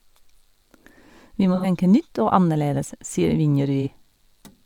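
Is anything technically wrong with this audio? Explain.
Yes. At 1.55 to 1.66 s, just before "tenke nytt", and again at 3.81 to 3.88 s, the speech turns briefly smeared and noisy. This is AAC frame loss with concealment: about 85 ms (roughly two frames) and then 43 ms went missing, and the decoder filled the gaps from the last good spectrum.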